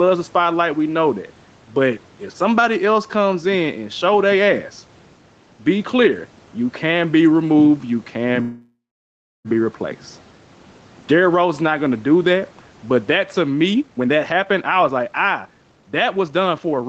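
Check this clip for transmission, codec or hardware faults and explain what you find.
Three faults stand out in this speech: gain pumping throughout, a call audio freeze near the middle, and a jitter buffer speed-up at the end. The audio stops at 8 kHz, as the call path limits it.

Gain pumping runs through the whole clip. The level swing is around 10 dB. Loud and quiet passages sit close together, and the sound feels squashed. The likely cause is input gain set far too high, with a fast limiter or compressor pulling it down on every loud sound.

The call audio freeze runs from 8.41 to 9.48 s, right after "be removed you can". The last sound carries on and fades. It then drops to silence for about 0.68 s. Speech resumes with "be replaced" and picks up where it stopped. Nothing is lost. About a second of gap has been inserted instead. Delayed packets likely drained the jitter buffer, so the receiver had to fill the wait.

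The jitter buffer speed-up starts at 13.74 s, after "that to", and lasts until 16.85 s. Speech runs at about 129% speed with its pitch unchanged. It sounds hurried. The receiver had built up more delay than it wanted. To shed it, the receiver cut many tiny pitch-period slices in quick succession. That removed about a second of audio over those three seconds.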